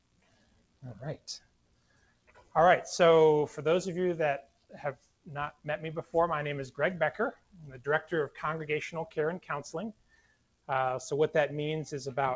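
A speech-tuned noise suppressor was left running on this sound for the whole clip, treating held, steady material as noise and pulling it down. The level swings by around 15 dB, so sustained parts pump and thin while sharper onsets push through mostly intact.

The sound cut by the noise suppressor is clearest at 0.00–0.84 s, 1.17–2.55 s, 4.42–4.75 s, 4.95–5.28 s, 7.33–7.86 s and 9.93–10.69 s. Each dips by about 16 to 18 dB, so the sound sinks and its decays get clipped short. The call path's band limit is audible too, with nothing above 8 kHz.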